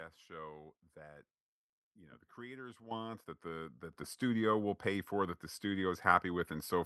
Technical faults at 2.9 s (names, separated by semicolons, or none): microphone volume stepped up